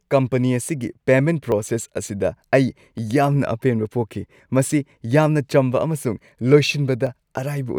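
Sharp single clicks at 1.52, 2.98 and 7.07 s are likely dropped samples: under a millisecond vanishes, so the waveform jumps abruptly, leaving no audible gap like a dropout.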